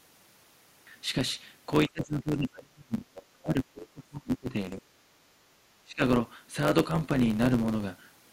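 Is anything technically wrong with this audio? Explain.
Yes, there are three kinds of fault in this speech clip.

Block size mismatch (truncated), throughout: one stage writes longer blocks than the next reads, which fits 512-sample blocks, and each block's tail is discarded. The result is a steady buzz at 91.9 Hz, and the speech runs 1.07 times fast while keeping roughly its normal pitch.

Speech suppressed in double talk, from 1.89 to 3.09 s, 3.42 to 4.56 s, and 5.83 to 6.02 s: the talker's level drops sharply, by up to about 30 dB in the first stretch and about 25 dB in the others. The likely cause is an echo canceller that turned everything down while both sides spoke at once.

Other side's voice leaking through, from 3.16 to 3.22 s: a brief, faint scrap of a second voice appears, roughly 20 dB below the main speech. This is likely residual loudspeaker echo that the canceller failed to remove from the microphone signal.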